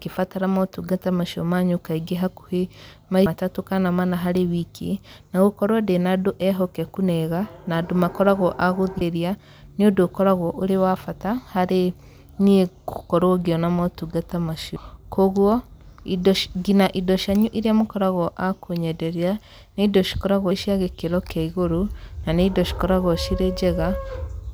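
Audio missing between chunks at 3.26, 9.01, 14.76 and 20.51 s, just before "matatũ kana mana" and just after "niĩ gũkorwo ngĩona motungata". Each skip drops roughly 300 ms of speech, spliced without silence, likely from six-second processing chunks.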